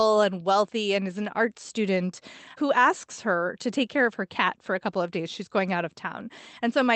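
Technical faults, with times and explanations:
No technical faults detected.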